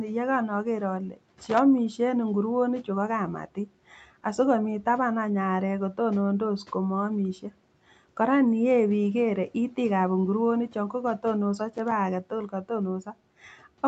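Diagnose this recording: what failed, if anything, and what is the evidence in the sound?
Speech cut by the noise suppressor, in the call processing stage: from 1.09 to 1.18 s, about a tenth of a second of speech drops by about 12 dB and sounds swallowed. The suppressor mistook that stretch for background noise. A spectrogram shows a brief fade across the speech bands.

Loose connector crackle, in the analogue wiring: irregular scratchy bursts occur at 1.41–1.59 s, just before "en inguroni chuu ko", and at 11.75–11.92 s, just after "inguroni chon ko kotonoso". A flaky contact chops the signal, which shows as jagged spikes and dropouts in the waveform and broadband vertical streaks on a spectrogram.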